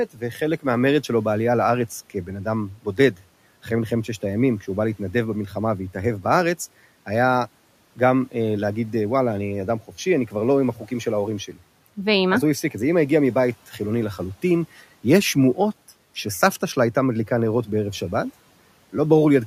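The noise suppressor misjudged parts of the speech as background and turned them down, so speech is cut by the noise suppressor twice. From 2.74 to 3.22 s, about a fifth of a second of sound drops by about 13 dB and sounds swallowed. At 10.75 to 10.9 s, a brief dip of about 10 dB leaves the sound faint. The room noise sits about 28 dB below the speech.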